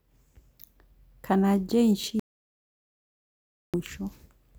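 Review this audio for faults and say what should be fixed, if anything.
At 2.20 s the speech cuts out dead and doesn't return until 3.74 s, so about 1.54 s is simply gone. It's an audio dropout to silence: pure silence with no room tone, most likely a lost input that the recorder kept writing through. Next time, secure cables and wireless links and keep an eye on input meters during the take.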